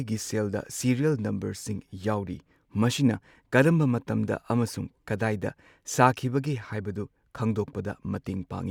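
Nothing here stands out as a technical fault; the speech just runs along without any glitch, dropout or distortion catching the ear.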